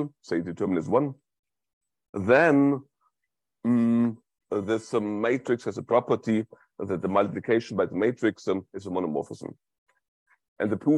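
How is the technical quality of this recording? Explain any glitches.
The recording has one glitch. Damaged data in a compressed stream appears from 2.05 to 2.14 s. For roughly 90 ms, part of the encoded data reaching the decoder was corrupt, through lost, zeroed or overwritten bytes. The decoder could not interpret those frames correctly, dropped sync and had to search for the next valid frame header before playback recovered. The result is a brief chirp, squawk, click or short hole at that moment.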